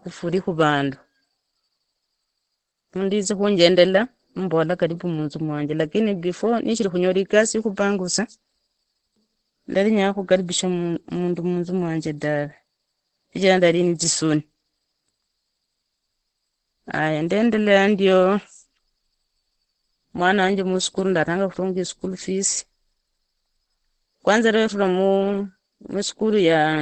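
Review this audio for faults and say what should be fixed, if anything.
Opus compression runs throughout the speech: nothing above 8.6 kHz, and the voice sounds muffled and hoarse, likely from the speech (SILK) mode at a low bitrate near 16 kbps. Unlike MP3, there is less swirling, just rough, band-limited hoarseness. Encode at a higher bitrate so Opus keeps its full bandwidth.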